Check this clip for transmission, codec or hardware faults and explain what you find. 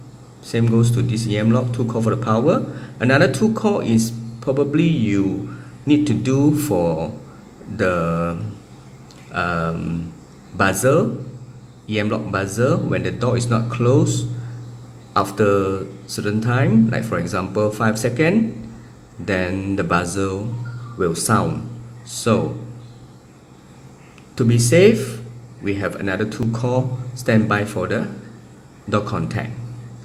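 One fault shows up, a repeated buffer at 26.43 s. New audio didn't arrive in time, so the device replayed its last block once more. That block lasts 1.45 ms, which fits a 64-sample buffer. The piece is too short to stutter and is heard as a single click, with nothing apparently lost. On a spectrogram it appears as a thin broadband vertical line. The waveform shows the same tiny segment twice, with hard discontinuities at the joins.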